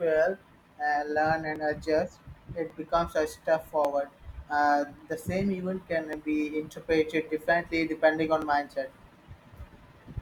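A speech recording with a regular click about every 1.15 s from 0.41 to 9.57 s, likely clock drift buffer slips dropping or repeating a few dozen samples.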